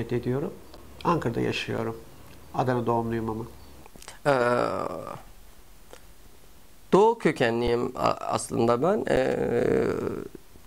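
The audio has four brief dropouts from an underrun with held sample, at 0.77, 1.77, 7.67 and 9.16 s. Each lasts about 5 to 10 ms. The playback buffer ran dry, and the converter froze on its last output value. The waveform goes flat at that level, so the sound stops without a sharp edge. Roughly the same span of audio is lost each time. Playback then jumps ahead.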